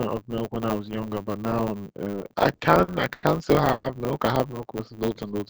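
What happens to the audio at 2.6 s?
At 2.6 s the speech drags and stutters. It sits inside a run of repeated stalls (stutter) from 2.20 to 3.25 s. Packets kept arriving late, so the jitter buffer emptied again and again. Each time, the receiver stretched the last sound to cover the wait, fading it in the longer gaps, the longest about 100 ms. That concealment fills roughly a quarter of the span, yet nothing is actually lost.

Underneath, a steady 100 Hz buzz runs and the speech moves about 1.09 times too fast while keeping its timbre. This is a block size mismatch (truncated): one stage writes longer blocks than the next reads, so each block's tail is discarded at a 100 Hz rate.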